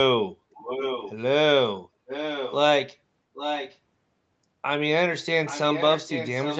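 A delayed copy of the speech, about 0.82 s late, intrudes at 0.54–1.15 s, 2.07–2.56 s, 3.34–3.77 s and from 5.46 s to the end. This echo leak sits roughly 10 dB down, nearer 5 dB in the third stretch. The likely cause is an incomplete echo canceller returning loudspeaker pickup.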